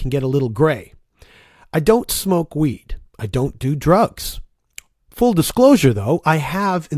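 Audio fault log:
No faults are audible at any point in the clip.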